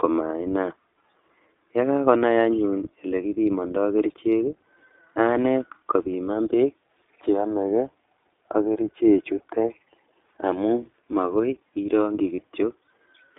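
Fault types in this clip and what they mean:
iLBC codec: Narrowband coding of each short frame on its own squeezes the audio into 300 Hz to 3.6 kHz, leaving the speech plainly rough and synthetic-sounding.
Lost iLBC frames: A packet went missing after "amun makoi irongchi", so the decoder patched 12.36 to 12.40 s with a brief buzzy held sound, fitting one lost 20 ms frame.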